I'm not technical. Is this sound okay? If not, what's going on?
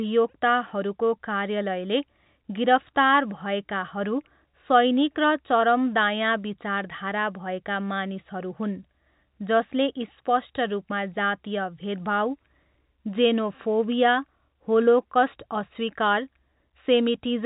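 Yes, this speech sounds fine, with nothing going wrong anywhere; it has the slightly narrow quality of an ordinary landline call, which is simply how the G.711 telephone coding used here sounds.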